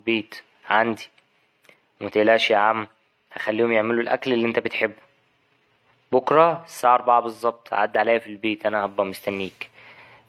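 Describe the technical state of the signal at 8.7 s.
At 8.7 s the speech carries transcoding between lossy codecs, present across the whole clip. The audio was likely encoded more than once: a low-rate stage, consistent with HE-AAC around 40 kbit/s, followed by AAC-LC, which fits about 64 kbit/s. Nothing survives above 17.5 kHz. What separates this from a single low-bitrate encode is that two artefact types sit together: the smeared, synthetic-sounding top end of the first stage, overlaid with fresh quantisation swirl from the second.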